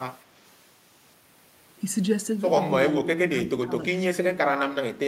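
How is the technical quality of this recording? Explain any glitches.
The recording is degraded by speech suppressed in double talk, twice near the end. An echo canceller likely failed to tell this talker apart from loudspeaker echo while both sides spoke, and pulled the whole signal down. From 2.93 to 3.74 s the speech dips and breaks up, losing around 30 dB at its deepest over roughly half a second in total. From 3.95 s to the end it sinks again, by around 25 dB.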